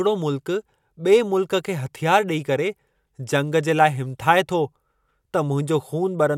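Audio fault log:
No fault is logged for this speech clip.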